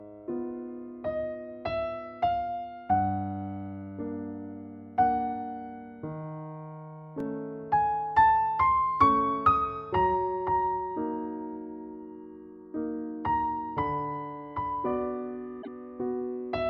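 A repeated buffer occurs at 7.20 s: fresh audio failed to reach the output in time, so the device replayed its previous 2.67 ms chunk, which fits a 128-sample buffer. With so small a piece, the doubled playback and its hard joins come through as a click or brief buzz, and a few milliseconds of audio go missing.

Repeated frames follow from 15.61 to 15.68 s: a 24 ms block of compressed audio was delivered twice, which points to a single frame being resent, and the decoder played it again. This is heard as a brief stutter, and it stretches the audio by 24 ms.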